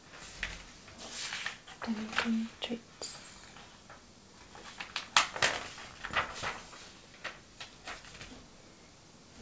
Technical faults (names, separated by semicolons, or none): none